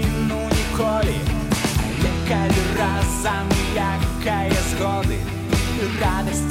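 No technical faults can be heard anywhere in this clip. There is nothing here that calls for a time or a cause.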